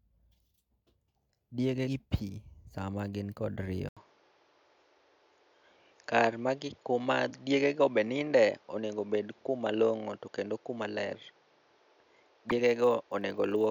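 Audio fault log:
1.86 and 12.49 to 12.79: compressed frames skipped. About 70 ms, then about 50 ms, of sound never plays.
3.89 to end: input switched to a poorer device. After an 80 ms gap the sound turns duller, with nothing above 7 kHz. Level shifts roughly 5 dB, and new noise sits about 35 dB down, likely from a change to another microphone.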